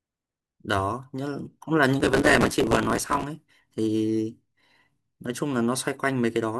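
From 2.0 to 3.24 s the processor falls behind and misses buffer deadlines over and over, a processor overload crackle. Each missed slot, which fits buffers of around 5 ms, replays a sliver of old audio with hard edges, so the speech is torn by a gritty burst of crackle until the load eases.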